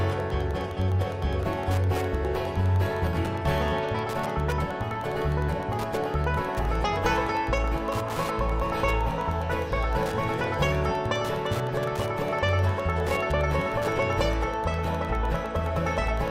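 Wi-Fi interference runs throughout: a nearby radio's beacons, every 102.4 ms, are rectified by the audio circuit, producing steady ticking about ten times a second, roughly 20 dB below the sound.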